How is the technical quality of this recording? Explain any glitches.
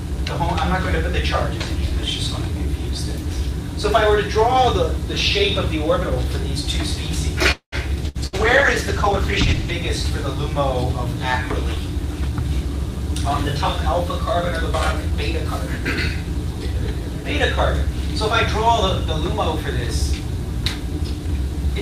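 The recording has several call-transport glitches, clustered around 7.5 to 9.8 s and again near the end.

From 7.51 to 7.75 s the sound stalls: the last moment is drawn out as a fading buzz that drops to about 100 ms of silence, then the audio picks up exactly where it left off, with nothing lost. This call audio freeze was likely caused by packets held up in transit, which let the jitter buffer run dry. The receiver padded roughly 0.21 s and pushed everything after it later.

Right after, from 8.07 to 9.83 s, the audio turns coarse, watery and dull, with the top end rolled off. This is a call bitrate drop. The encoder was told to fall from 48 to 14 kbps after the bandwidth estimate sank, and it stayed at the lowest rate for about 1.7 s before recovering. At that rate Opus quantises roughly and discards high frequencies.

Inside that stretch there are two bursts of packet loss, at 8.08 to 8.17 s and 8.26 to 8.36 s. 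Each time the sound briefly smears into a held, fading buzz or hiss, then jumps ahead. Unlike the freeze, about 60 ms of audio is genuinely missing at each one, because the packets never arrived in time and the receiver could only extend and fade what it last had.

Finally, the audio runs slightly fast from 15.12 to 17.98 s, at 102%, and from 20.13 to 21.76 s, at 104%. The pitch stays put. This is jitter buffer speed-up. With excess audio queued, the receiver trimmed many tiny pitch-period slices to shrink the delay, taking out around 70 ms in each stretch.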